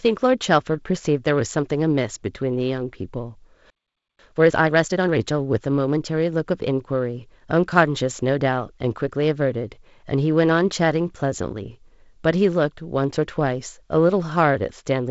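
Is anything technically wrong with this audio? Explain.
Yes, there are two related faults in this speech, both early in the clip.

At 3.70 s the sound stops dead and stays silent until 4.19 s, a gap of about half a second. This is a playback stall: the player most likely ran short of buffered data, or its output thread was held up, and it had nothing to send until it recovered. Unlike a packet dropout, where a piece of audio is lost and the sound jumps ahead, here the sound halts outright, and the speech picks up after the silence.

From 4.19 s to 5.17 s the speech runs at 1.5 times normal speed. This is time-compressed catch-up. Having fallen behind during the stall, the player works through its backlog by cutting out short slices and cross-fading across the joins. The speech sounds hurried. Unlike simply playing the samples faster, this method keeps the pitch unchanged, so the speech does not get the raised, chipmunk-like pitch of a sped-up recording.

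The G.722 wideband coding, with its top end near 7.7 kHz, is not one of these faults.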